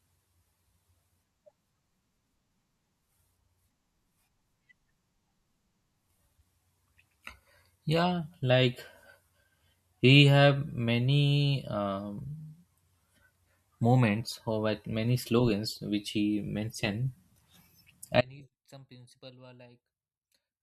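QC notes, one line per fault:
18.21 s to the end: audio dropout to a faint residue. The speech cuts out abruptly mid-flow and never returns, leaving only a faint trace of the signal roughly 30 dB below its normal level. The abrupt cut, with the path still live after the break, likely means the feed was lost upstream.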